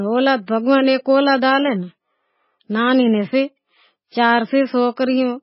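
A speech clip that was likely squeezed through heavy MP3 compression at a very low bitrate, around 16 kbps, throughout. The encoder discards everything above about 5.6 kHz, dulling the sibilants, while starved frequency lines flicker frame to frame, leaving a watery, swirling texture and smeared attacks.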